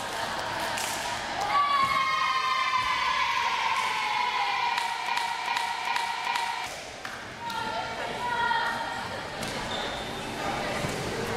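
From 5.08 s to 6.66 s, a broken-record loop repeats one 0.39 s fragment four times back to back, replacing the audio due there; a stalled player or stream likely resent its last buffer. Waveform and spectrogram show identical blocks tiled end to end.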